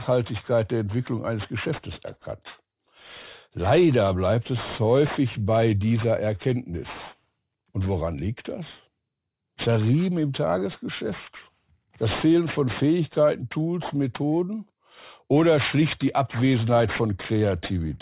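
Aliasing runs through the whole speech clip. The audio stops hard at 4 kHz, which points to a drop to an 8 kHz sample rate, likely from 48 kHz. No filter removed the content above that edge first. So higher energy folds back below 4 kHz at wrong, unrelated pitches. The folded energy sits roughly 15 dB under the speech. Sibilants sound gritty and metallic. The top of the spectrum stays crowded right up to the band edge.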